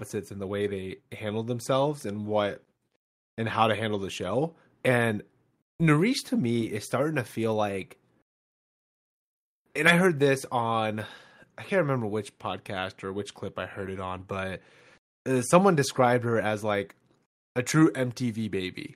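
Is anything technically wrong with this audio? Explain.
No, nothing technically wrong can be heard here: the speech signal comes through intact and steady, with no audible disturbance at any point.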